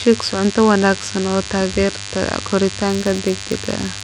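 From the start of the speech, a DECT cordless phone buzz runs underneath, sitting roughly 15 dB below the voice. A nearby handset or base pulses every 10 ms, and the audio circuit rectifies those bursts into a thin 100 Hz drone. On a spectrogram it shows as evenly spaced horizontal lines at 100 Hz and its harmonics.

Throughout, the treble is missing and flickering, with a gritty, grainy edge on the speech. The damage is plainly audible and is likely Bluetooth SBC compression at a tight bit budget, such as 96 kbps. Starved upper bands are quantised coarsely or dropped. A spectrogram shows patchy, blocky energy in the upper range.

From 2.88 s to the end, a filter restarted on every block adds a buzz at about 86.1 Hz that swells and fades with the speech level. Each block starts from silence and opens with a small transient, and the rate fits a 512-sample buffer. The waveform shows regularly spaced ticks at each block boundary, and a spectrogram shows vertical striping with a comb of harmonics.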